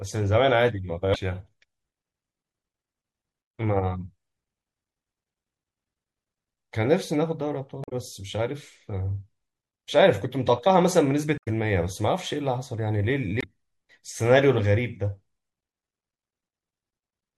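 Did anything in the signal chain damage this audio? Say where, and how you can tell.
Yes. At the codec stage, the whole speech clip sounds watery and swirly, with a dulled top end and smeared consonant onsets, likely from MP3 compression at a rate that sounds like about 64 kbps. Unlike a simple low-pass, the missing detail flickers from frame to frame.

Damaged data in the compressed stream is audible at 1.12–1.16 s, 7.81–7.92 s, 11.37–11.48 s and 13.38–13.44 s as short glitches. The decoder misreads frames, then resyncs at the next header. A network dropout would leave a gap instead.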